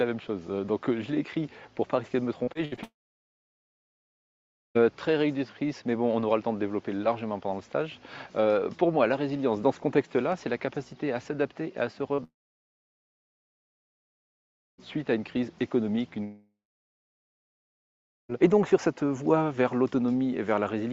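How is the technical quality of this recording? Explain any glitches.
The recording has clear network transmission faults: a choppy burst early on, three long silences, and one brief concealed glitch.

From 2.43 to 2.79 s there is repeated packet loss with a robotic sound. Four gaps, the longest about 64 ms, lose roughly 140 ms in total. Each gap is patched by extending the preceding sound, which gives a choppy texture across more than a third of that span.

Three long network dropouts follow, at 2.83 to 4.77 s, 12.24 to 14.80 s and 16.24 to 18.31 s. Each begins with a short fading continuation of the last sound and then goes to near silence for about 1.8 s, 2.5 s and 1.7 s. The likely cause is that no audio arrived, so that material is simply absent when the sound resumes.

At 12.15 to 12.20 s, short concealed packet loss leaves about 40 ms missing. The decoder bridges it by extrapolating the preceding signal and blending back, heard as a brief smear just before the second dropout.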